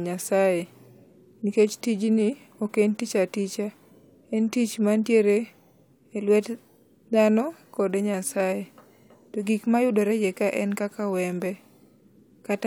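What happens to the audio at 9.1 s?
Nothing goes wrong at 9.1 s; the speech there plays through intact, with no dropout, click or distortion.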